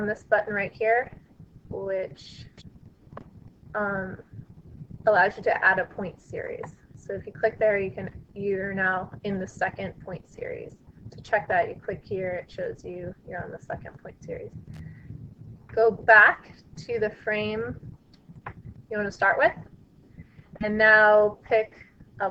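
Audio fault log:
14.74–14.80 s, loose connector crackle: a short, irregular burst of crackle and scratching lasting about 60 ms, as a worn or dirty contact in the signal path rapidly makes and breaks, chopping the audio, with any DC on the line adding pops.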